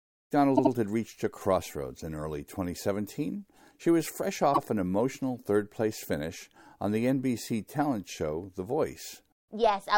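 Just after the fade-in, at 0.56 to 0.72 s, a 78 ms block plays three times in a row, and at 4.53 to 4.59 s a 52 ms block plays twice. These are repeated frames: a short run of compressed data was decoded again. Each repeat is an exact copy, which sets it apart from an echo or a dropout. Together the repeats stretch the sound by about 0.2 s.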